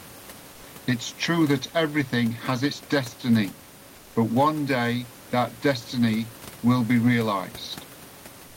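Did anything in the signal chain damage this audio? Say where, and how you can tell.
Yes, at the codec stage, as comfort noise in place of the background, twice: from 0.51 to 0.63 s and from 8.47 to 8.57 s. In both pauses the room noise, about 25 dB below the speech, turns into a steady, textureless hiss about 2 to 3 dB quieter. On a spectrogram the grainy floor becomes a smooth, uniform band with a small level step. The likely cause is Opus DTX: the sender stopped transmitting during silence and the receiver synthesised shaped noise instead.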